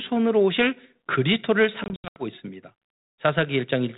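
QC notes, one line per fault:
1.84–2.25 s, packet loss on an ADPCM call: around ten packets dropped to silence, 200 ms lost over 320 ms (longest gap 80 ms), then the decoder's predictor and step size lag the sender's.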